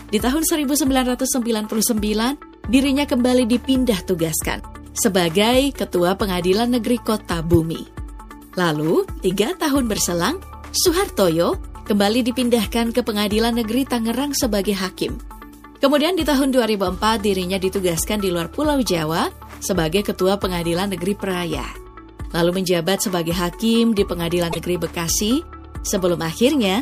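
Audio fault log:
7.53–7.56 s, corrupt frame decoded: a sharp, loud glitch, with error peaking around -5 dBFS, lasting a couple of codec frames. Flipped bits in the compressed data were decoded anyway, so misread gains threw energy into the wrong frequencies.
9.17–9.19 s, corrupt frame decoded: a faint, brief glitch over a couple of frames, from the same kind of damaged frame data, much lower in level.
24.50–24.59 s, corrupt frame decoded: a longer, fairly loud glitch spanning around four damaged frames played as if valid.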